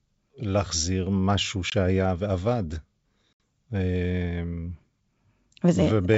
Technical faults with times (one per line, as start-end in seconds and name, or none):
1.70-1.73 packet loss on an ADPCM call
3.33-3.40 packet loss on an ADPCM call